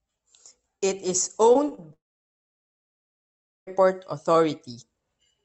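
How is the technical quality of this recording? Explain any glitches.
The recording has two kinds of glitches, both clustered in the speech around 1.5 to 3.7 s.

Short concealed packet loss occurs at 1.53, 1.69 and 1.75 s. Each time, about 20 ms of audio arrived too late for the decoder, which patched the gap by extending the preceding sound and then blending back. Each event is a quick smear or wobble that can swallow a brief consonant.

A long network dropout follows from 1.93 s to 3.69 s, likely caused by the connection stalling so that no audio reached the receiver. The last sound trails off briefly as a fading buzz or hiss, then about 1.7 s of near-silence remains. The speech resumes afterward, with that stretch missing.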